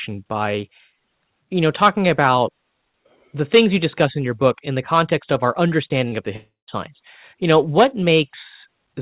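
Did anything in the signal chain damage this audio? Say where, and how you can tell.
Yes. The damage happened on the network leg of the call. Short concealed packet loss occurs twice, just after "the context of our" and before "of the": at 5.88 to 5.92 s, where about 20 ms went missing, and at 6.08 to 6.14 s, where about 40 ms did. Each time the receiver's concealment extended the preceding sound to cover the gap and then blended back into the real signal. You hear this as a brief smear or wobble instead of a clean transition.

Right after "of the", from 6.36 to 6.69 s, there is a long network dropout. It was likely caused by a burst of packets that never arrived, which took out about 320 ms of audio. The decoder first stretched the last sound into a fading continuation, and then left roughly 140 ms of silence before the real signal resumed. The audio picks up again further along, and that stretch is gone. 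The call itself carries the G.711 band-limited sound, which has nothing above 4 kHz.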